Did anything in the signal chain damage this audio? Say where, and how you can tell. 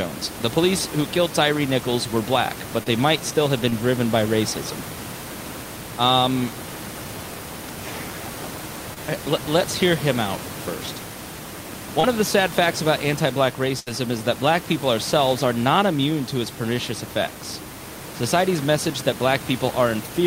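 Yes, the network stage damaged it. There are four cases of short concealed packet loss, at 2.83 to 2.88 s, 3.70 to 3.74 s, 8.94 to 8.98 s and 12.00 to 12.05 s. Each sounds like a brief smear or wobble in the speech. At the first three, 20 ms of real audio is gone, which fits a single 20 ms packet. At 12.00 s, 40 ms is gone. In each case the receiver extrapolated the preceding sound for about 21 to 33 ms and then cross-faded back into the real signal. On a spectrogram the patch shows as harmonics held flat or as smoothed noise, with no fresh onsets. In the waveform, consecutive pitch periods look suspiciously identical, and short consonants can be missing.

The network stage also caused a burst of packet loss at 13.79 to 13.88 s. Here 60 ms of speech never arrived, and the receiver filled 71 ms in its place. It did this by continuing the last sound and turning it down as the gap went on, so the result is a held buzz or a fading hiss. 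The speech then resumes further on, with the lost part skipped. On a spectrogram this shows as a stretch of frozen, decaying harmonics or noise, followed by an abrupt jump in content. The waveform shows a decaying repetitive envelope.

Room noise sits about 11 dB below the speech throughout. It belongs to the recording, not to the signal chain.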